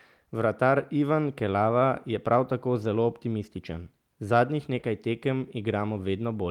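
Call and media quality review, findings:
Hard clipping, 2.33 s: brief crackle on a speech peak. Level hits the ceiling at a converter or fixed-point gain stage, just touching it at about 0 dB of overdrive, so the top gets squared off for a moment.

Hard clipping again, 4.35 to 4.39 s: slightly longer crackle, overdrive about 1 dB. Same ceiling, peaks flattened, high harmonics sprayed up top. Probably a gain stage before the encoder set a touch hot.

Short concealed packet loss, 4.79 to 4.85 s: quick smear or wobble. Around 40 ms missed the decoder, and the jitter buffer/PLC extended the preceding sound for 40 ms, then cross-faded back into real audio. Network-side loss.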